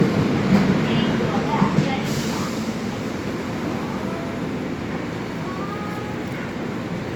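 Generation loss runs throughout: the sound is swirly, smeared and hollow, with blurred attacks, beyond what one pass would leave. The likely cause is repeated lossy encoding, about three times, which fits Opus at 64 kbit/s, with fresh quantisation on shifted frames compounding noise, and nothing remains above 20.1 kHz.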